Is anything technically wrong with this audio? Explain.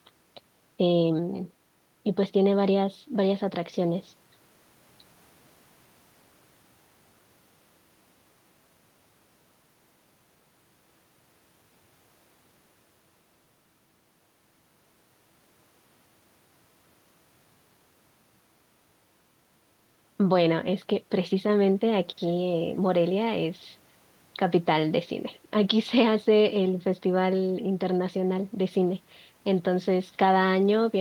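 No, nothing is technically wrong with this audio.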